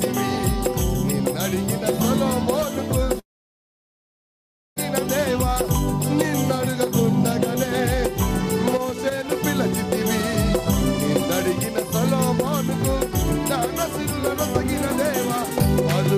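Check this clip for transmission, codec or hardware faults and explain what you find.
There is one fault: a long network dropout from 3.19 s to 4.79 s. The sound breaks off and is briefly continued by a fading buzz. For about 1.53 s only silence remains. The audio then resumes further along, with about 1.56 s of material simply gone rather than delayed. The likely cause is a stretch of packets that never reached the receiver, which covered the gap with concealment and then silence before picking up again at the next packets that arrived.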